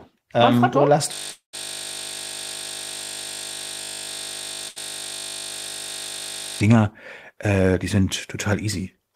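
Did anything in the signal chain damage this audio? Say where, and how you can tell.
Yes. A system hang loop runs from 1.13 s to 6.60 s. This is a driver or buffer fault: the host stalled while the hardware kept replaying one 20 ms slice of its ring buffer, hundreds of times over. That is why it sounds like a steady 50 Hz buzz in place of the speech.

A long network dropout sits at 1.31 to 1.55 s. About 220 ms of audio is missing, and the sound trails off into silence before the stream picks up further on. The likely cause is the network path: nothing arrived, so the receiver stretched the last audio until it ran out.

A burst of packet loss occurs at 4.69 to 4.78 s, also at the network stage. About 80 ms never arrived in time. The receiver held the last sound for about 70 ms as a fading fill, then jumped ahead, leaving that stretch missing.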